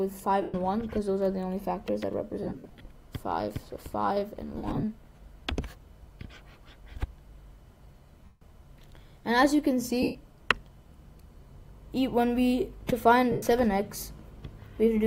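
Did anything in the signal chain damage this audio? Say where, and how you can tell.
Yes, lost LE Audio frames on the Bluetooth link, concealed by the LC3 decoder. There are gaps at 0.42–0.54, 2.43–2.85, 4.57–4.83, 8.25–8.41, 10.02–10.15 and 13.32–13.43 s. The second and third are scattered dropouts with runs up to roughly 70 ms. The decoder reuses the last spectrum with random signs and fades it, so tones smear into noise.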